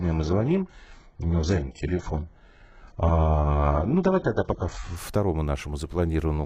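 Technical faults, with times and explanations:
0.00 to 4.96 s, adaptive stream starting at a low bitrate: the speech opens dull, nothing above about 7.9 kHz and stronger codec smearing, which points to something like an 8 kbit/s HE-AAC rendition, then snaps cleaner with no gap once the player steps up.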